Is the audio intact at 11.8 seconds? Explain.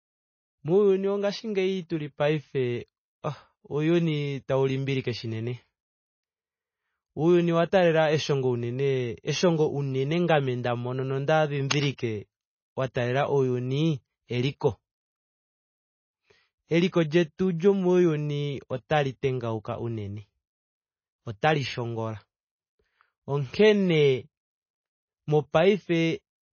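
No. From 11.70 to 11.86 s there is a burst of cable scratch noise: dense, uneven crackling laid over the speech for about 0.16 s, only a few decibels below the speech itself. It is likely caused by a worn cable, connector or control carrying a DC voltage being moved, so its contact resistance jumps about rapidly. Unlike a single click or a dropout, it is a rough, rustling cluster of noise, and the speech continues underneath it.

That moment also carries the MP3 compression heard throughout the clip. The damage is plainly audible: a watery, swirling texture as weak frequency components switch on and off from frame to frame, smeared attacks, and nothing above 6.5 kHz. This most likely comes from encoding at a low bitrate, and the sound fits something around 24 kbps. It sets itself apart from the scratch by being continuous rather than a brief burst, and by removing and smearing detail instead of adding noise on top.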